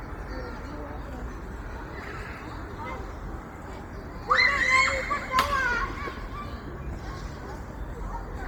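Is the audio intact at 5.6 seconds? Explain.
No. Bluetooth LC3 compression runs through the whole clip, including 5.6 s, and is the likely cause of the damage: heavy coding that fits 32 kbps with 10 ms frames zeroes upper-spectrum detail and fills it with noise, so the sound turns breathy and grainy below 20.1 kHz.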